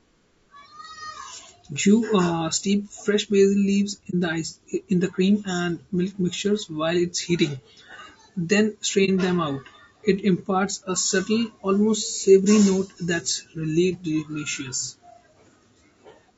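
Throughout, the speech sounds rough and grainy, with noise between harmonics and a dulled top band. This is likely low-delay AAC compression, fitting roughly 32 kbps. AAC frame loss with muting leaves brief dips from 4.10 to 4.14 s, before "the ice in the", and 9.05 to 9.10 s, before "them out". Lost frames decode as silence and fade smoothly.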